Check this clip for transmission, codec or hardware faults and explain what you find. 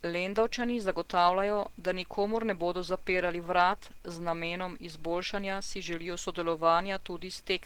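One codec fault runs through the whole clip. The speech sounds hoarse and muffled, with a grainy, noisy sheen over the upper range, and the damage is plainly audible even though the top end stays open to about 20.1 kHz. This is likely Opus compression in its hybrid mode, with the speech coder handling the low band and the transform coder filling the highs with folded or noise-like energy. The strain fits a low bitrate near 16 kbps.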